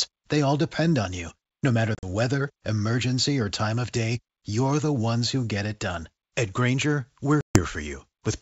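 A speech recording carried over a G.722 wideband call, where the upper band reaches up to 7 kHz, suffers packet loss on an ADPCM call. Between 1.95 and 2.05 s, about 70 ms drops out in short holes, the longest 40 ms, just before "weather emergency or time." From 7.41 to 7.61 s, about 140 ms vanishes. The waveform falls silent with hard edges, and the spectrogram shows blank vertical gaps. When the speech returns, the decoder's predictor and step size no longer match the sender's, so there is a brief, slightly distorted stretch.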